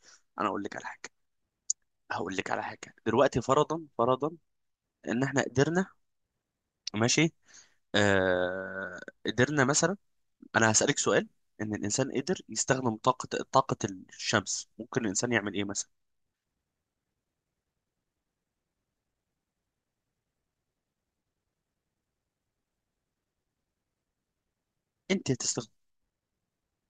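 No technical faults can be heard anywhere in the speech. There is nothing here that needs a time or an explanation.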